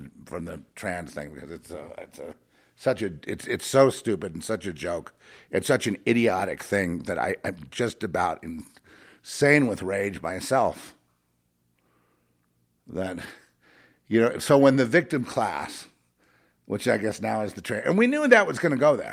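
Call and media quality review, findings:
Nothing stood out on listening to the speech recording.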